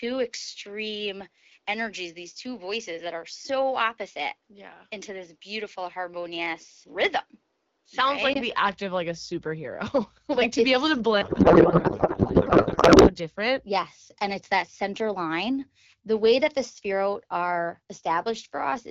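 From the start to 8.35 s, the recording was most likely made on a poorer input device, with the system then switching to a better one. That device passes a narrower band, so the opening sounds duller and boxed in, with its own faint noise floor roughly 45 dB under the speech. At the switch there is a 20 ms gap, and the sound opens up just before "like the act of", with no real change in loudness.

From 11.21 to 13.16 s, right after "to be able to", there is a codec payload misread. The AMR frames were packed octet-aligned but decoded as bandwidth-efficient, so the fields are read from the wrong bit positions. The decoder turns out plausible-looking frames that no longer carry the speech. For those two seconds the speech is replaced by garbled, warbling noise that barely tracks it, and the speech returns when the two sides agree on the packing again.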